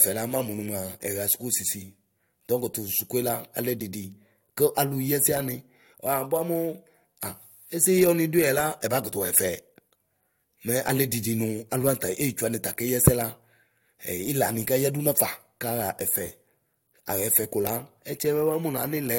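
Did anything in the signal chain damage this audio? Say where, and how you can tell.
No. Nothing in the signal chain damaged this recording.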